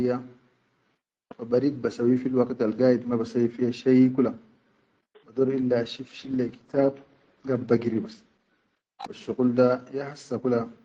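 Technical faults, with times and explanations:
5.99 to 10.57 s, call bitrate drop: the call's bandwidth estimate fell and the encoder was pushed from 32 kbps down to about 14 kbps, staying at its lowest for roughly 3.3 s. With so few bits, Opus quantises the speech more coarsely and narrows its coded band from 12 kHz to 8 kHz, so the top end disappears and the voice turns muffled, rough and watery until the rate climbs back near the end.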